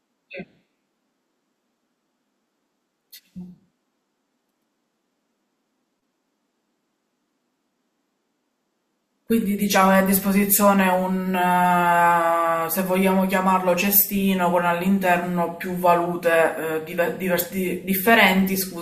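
Nothing in the recording stands out as a technical fault at any point, so there's nothing here to flag.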